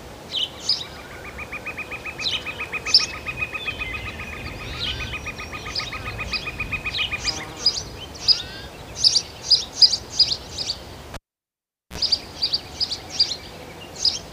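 At 11.14 s the sound is cut by a pop and drops to near silence for about 0.79 s. That is a cable pulled and plugged in: a live connector is withdrawn and reinserted. As the plug goes back, a short burst of 60 Hz mains buzz, about 48 ms long, leaks in while only the tip makes contact. A second pop at 11.98 s brings the sound back. The pops at both ends and the buzz mark this as a physical disconnection rather than a digital dropout.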